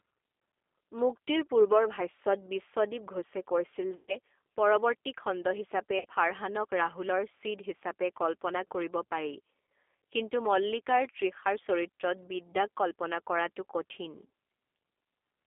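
Speech runs through the G.729 codec for its whole length, and the damage is plainly audible. The sound is confined to a phone band of about 300 Hz to 3.5 kHz, so it has no air and little body. At 8 kbit/s the voice is rebuilt from a vocal tract filter and a few pulses per frame. That is why it sounds rough and faintly synthetic rather than natural. VoIP packet loss concealed by the speech codec then breaks the flow three times. From 3.96 to 4.17 s, just before "পৰৰ্ৱতী খণ্ড হিচাপে ফাৰহানক", about 120 ms goes missing, which fits four lost packets. From 5.99 to 6.05 s, right after "পৰৰ্ৱতী খণ্ড হিচাপে", about 60 ms is lost, which fits two packets. At 14.26 to 14.29 s, after "কল্পনা কৰাটো কঠিন", about 30 ms drops, which fits a single packet. In each gap the decoder stretches the last pitch and filter state into a buzzy tone or coloured noise that fades. The voice stays weak or smeared for a short while after each gap, until the frames rebuild.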